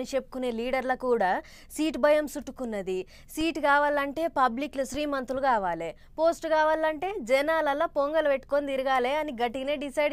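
At 3.41 s and again at 4.94 s, a DC step occurs. The waveform's zero line suddenly shifts by about -26 dBFS. Each jump is heard as a low thump. The offset then drains away, as a 20 Hz high-pass would let it. The sound itself carries on unchanged.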